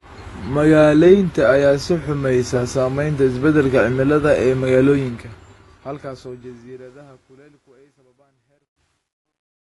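Throughout, the speech sounds dull and smeared, with a fizzy, warbling edge on sibilants and nothing above 11.5 kHz. The likely cause is AAC compression, and damage this plain fits a low bitrate near 32 kbps. It persists to the end of the clip.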